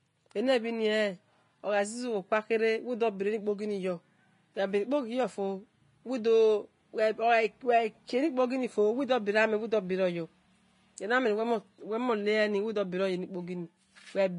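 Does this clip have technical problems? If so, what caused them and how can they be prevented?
Yes. Throughout the speech, the treble sounds hissy and grainy, with nothing above 10.6 kHz. This is likely Vorbis compression at a low bitrate, around 31 kbps. Encode at a higher bitrate to prevent it.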